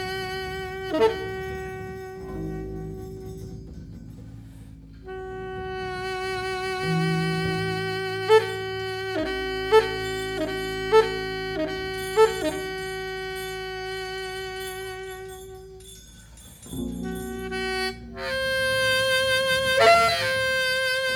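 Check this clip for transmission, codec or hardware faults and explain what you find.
Nothing stood out on listening that would point to a transmission, codec or hardware problem anywhere in the audio.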